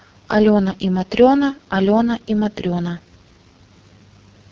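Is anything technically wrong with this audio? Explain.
Yes. For the whole clip the speech has been through the AMR wideband (HD Voice) codec, and the damage is heavy. The codec models speech as pulses filtered by a vocal tract shape and fills the top band with shaped noise. The pronounced roughness and rasp point to its lowest mode, about 6.6 kbit/s. A spectrogram shows nothing above 7.3 kHz, a hissy, structureless band just beneath that ceiling, and smeared, blotchy harmonics below it.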